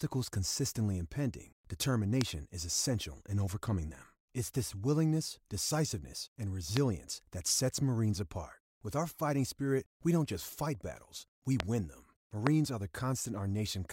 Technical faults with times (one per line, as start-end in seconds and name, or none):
2.21-2.23 loud pop
6.77-6.79 loud pop
11.60-11.62 loud pop
12.47-12.49 loud pop